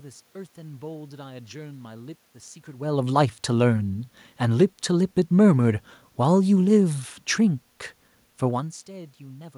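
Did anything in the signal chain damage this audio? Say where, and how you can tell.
No signal-chain damage heard.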